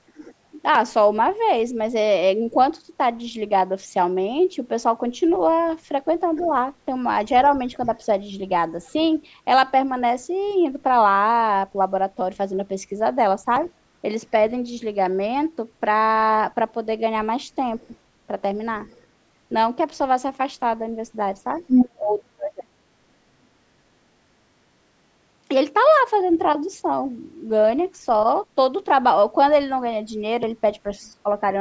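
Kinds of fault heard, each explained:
Other side's voice leaking through: echo cancellation likely missed loudspeaker sound, so a second voice bleeds in, mostly faint, but above speech level from 17.8 to 21.9 s.
Speech suppressed in double talk: with both sides talking, the canceller likely turned the talker down too, causing brief dips and a deep cut from 21.95 to 22.72 s.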